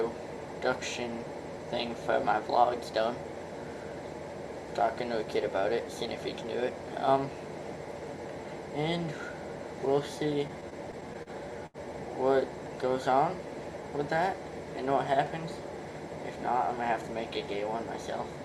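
From 10.47 to 11.29 s the audio stutters: repeated stalls (stutter), seven in all. Packets kept arriving late, so the jitter buffer ran dry each time and the receiver held the last sound for 109 ms in total, the longest hold 38 ms. On a spectrogram this looks like a run of brief horizontal smears.

At 11.66 to 11.77 s comes a short stall from a late packet. One packet missed its slot and the receiver stretched the preceding sound for 78 ms before resuming at the same point. The waveform shows a repeated, slightly dipping cycle, and the spectrogram shows frozen harmonics.

Between 12.89 and 13.84 s there is a jitter buffer slow-down. The receiver repeated single pitch periods to rebuild its reserve, adding 40 ms and playing at 96% speed with no change in pitch. The sound drags slightly, and the waveform shows repeated identical cycles.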